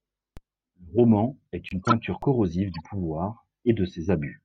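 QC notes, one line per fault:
0.37 s and 2.22 s, DC step: each is a single low thump or click under the speech, which carries on unchanged. The waveform's zero line jumps suddenly to a new offset, as when a converter recalibrates or an offset input is switched in. The jump then decays away at the rate of a 20 Hz high-pass, so the step is heard as a brief low-frequency knock and not a lasting shift.
1.69 to 1.92 s, corrupt frame decoded: a loud burst of error lasting about a quarter of a second, peaking around -5 dBFS. Damaged compressed data was decoded anyway, and misread gains and codes put energy at the wrong frequencies. The length suggests a run of several consecutive frames was hit.
2.74 to 2.80 s, corrupt frame decoded: a short, faint error, far quieter than the earlier burst, from the same kind of frame corruption over a shorter span.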